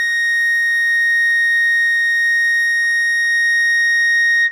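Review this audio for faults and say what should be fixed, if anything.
Nothing in this music needs to be fixed, as the review turns up no faults.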